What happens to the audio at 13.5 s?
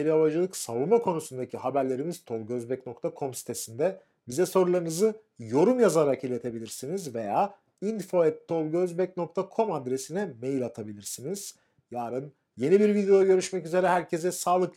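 Periodic clock jitter is present at that moment, as it is across the whole clip. Interference is shaking the converter's sampling clock at around 2 kHz, so every component of the sound picks up sidebands spaced about 2 kHz above and below it, strongest for the higher-frequency content. On a spectrogram these appear as mirrored bands flanking each component, while the waveform itself looks nearly normal. By ear it adds a rough, metallic edge that drops away in silence.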